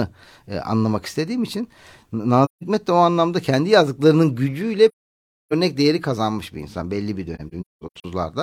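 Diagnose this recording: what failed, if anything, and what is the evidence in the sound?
Codec stage: AAC frame loss with muting. Soft-faded holes appear at 2.45–2.63 s before "de o anlamda kendi" and at 4.88–5.53 s between "anlamda kendi yazdıklarının gücüyle" and "değeri kazanmış bir insan". From 7.35 s to 8.05 s after "bir insan belli bir", the dropouts are scattered, with the longest run around 200 ms. The decoder zeroed the spectrum of the missing frames, and the overlapping windows taper the sound out and back in. On a spectrogram these show as full-band blank columns, and on a waveform as tapered holes.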